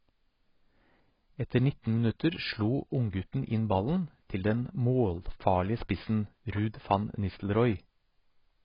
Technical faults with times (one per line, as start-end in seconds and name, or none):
0.00-8.64 AAC compression